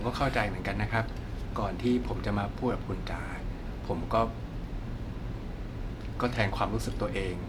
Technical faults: none

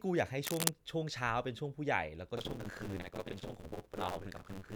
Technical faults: cable scratch noise; buffer tearing

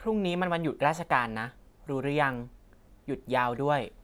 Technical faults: none

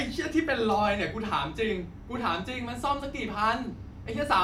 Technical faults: none

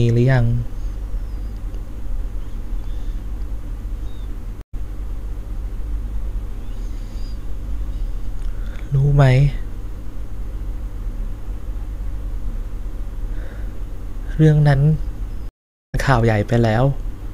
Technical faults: stream reconnect

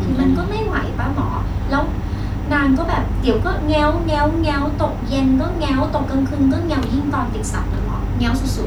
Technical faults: none

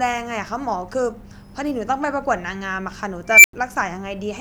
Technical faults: unstable filter

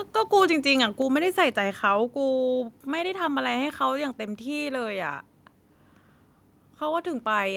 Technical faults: microphone volume stepped down; microphone overload

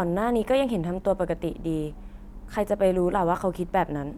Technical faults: none

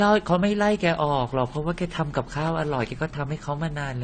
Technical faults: transcoding between lossy codecs

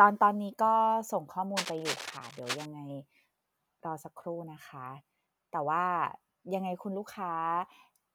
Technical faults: cable scratch noise

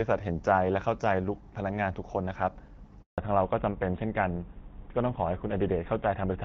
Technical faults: handover gap; fallback to narrowband

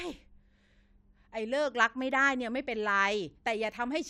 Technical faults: none

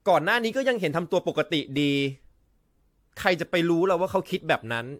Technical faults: generation loss

